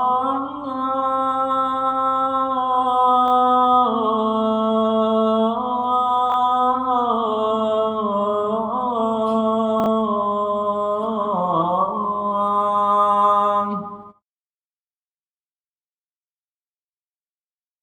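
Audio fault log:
3.26–3.30 s, 6.30–6.34 s and 9.80–9.86 s, chunks out of order: in each spot a 20 ms block of audio plays after material that should follow it, one block late at the first two times and two blocks late at 9.80 s. Nothing is missing, but the sequence is shuffled. Each swap leaves three hard joins where the waveform doesn't line up, so each brief moment sounds jumbled.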